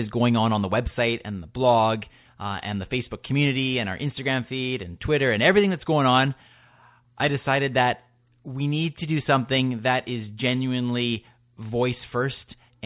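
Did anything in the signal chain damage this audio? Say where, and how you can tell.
No, nothing along the chain, from capture through to playback, left any damage I can hear on this speech recording.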